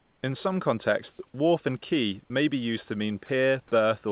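Comfort noise in place of the background fills the opening 0.23 s: the room noise, about 42 dB below the loudest sound, turns into a steady, featureless hiss about 4 dB quieter. The likely cause is discontinuous transmission, with the receiver synthesising noise while the sender sends nothing.

Sound dropped by the voice detector occurs three times. At 1.13 to 1.19 s, just before "wharf and quay", about 40 ms of sound gives way to flat noise. At 2.24 to 2.30 s, between "wharf and quay" and "be used to", about 20 ms is lost the same way. At 3.26 to 3.29 s, after "be used to", 30 ms of sound is replaced outright. The likely cause is the detector mistaking the sound for background and halting transmission until it triggered again. Over the call path, which has nothing above 4 kHz (consistent with G.711 at 64 kbps), the room's own noise sits about 41 dB below the speech.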